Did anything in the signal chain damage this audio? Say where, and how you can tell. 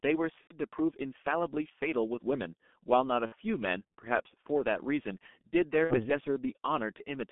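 Yes. The codec stage compressed the speech heavily as G.723.1, which fits a rate near 6 kbit/s. The line is confined to about 200 Hz to 3.5 kHz, so the speech sounds muffled and hoarse throughout, with smeared consonants from the coarse, slowly updated voice model.

The network dropped packets, shown as VoIP packet loss concealed by the speech codec at 0.41–0.57 s, 3.26–3.35 s and 5.84–6.10 s. The decoder extrapolated its last pitch and filter across the first 60 ms of a 90 ms gap before muting its third lost frame, then across 60 ms twice, giving a fading buzzy tone or coloured noise and weak or distorted speech afterwards.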